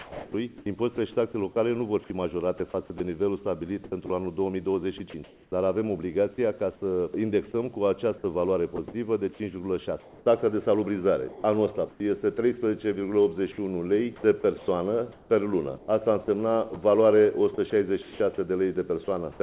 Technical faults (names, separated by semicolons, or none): sound chopped by the voice detector